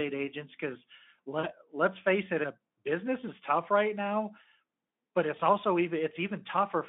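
Speech, carried over a Speex line limited to about 200 Hz to 3.5 kHz. VoIP packet loss concealed by the speech codec occurs at 1.39 to 1.49 s and 5.37 to 5.41 s. About 40 ms, then 20 ms, went missing. The decoder extrapolated, leaving a brief, fading smear.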